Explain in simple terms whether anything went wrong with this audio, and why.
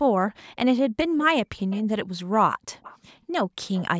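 Echo leak shows up three times, at 1.7 to 1.82 s, 2.82 to 2.98 s and 3.74 to 3.85 s. A faint copy of the speech trails 280 ms behind. A speakerphone's echo canceller likely let some of its own playback back into the call.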